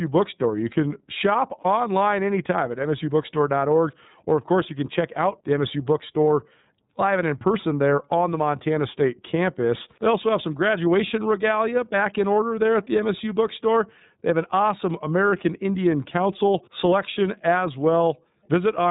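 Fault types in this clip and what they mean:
iLBC codec: Narrowband coding cuts everything above 4 kHz, and the 30 ms frame coding, fitting about 13.3 kbps, leaves the speech plainly rough and synthetic throughout.
Lost iLBC frames: One 30 ms frame drops out between "can shop" and "anytime at". The decoder fills it with a brief held vowel, slightly buzzy or breathy, then recovers immediately.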